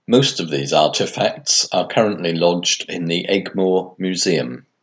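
Nothing stood out on listening to this speech; the only thing to note is the call microphone processing, which is working as it should and leaves nothing above 8 kHz.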